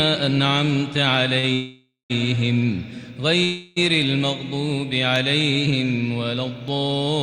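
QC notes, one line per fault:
1.145 s, 5.158 s, 6.682 s: dropped samples. Three lone sharp clicks, each a thin line straight up the spectrum. A tiny sliver of waveform, well under a millisecond, is likely missing, so the signal jumps to a later value. Nothing audible is lost, just the snap.
1.39–1.45 s: short stall from a late packet. A packet showed up late and the jitter buffer ran dry, so the receiver held the last bit of sound for about 38 ms and then carried on from the same spot. Nothing is lost, but that moment drags with a faint buzz or dip.
1.53–2.12 s and 3.44–3.78 s: call audio freeze. The sound hangs and turns into a fading buzz or hiss. The first runs about 565 ms, with roughly the last 180 ms dropping to silence. The second runs about 326 ms and never quite goes quiet. Each is likely packets held up in transit, with the jitter buffer empty until they arrived. Playback then resumes where it stopped, so gaps are added but nothing is cut.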